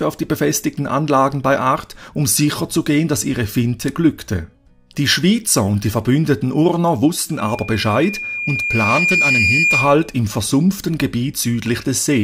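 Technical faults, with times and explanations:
7.37 to 10.2 s, loudspeaker feedback squeal: A pure tone near 2.4 kHz rises out of the sound. It swells over roughly two seconds and ends up a few decibels above everything else. The microphone is picking up its own loudspeaker, and at this frequency the loop gain exceeds one.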